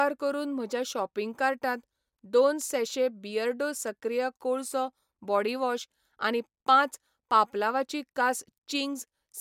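The speech recording has no audible technical faults anywhere in the clip.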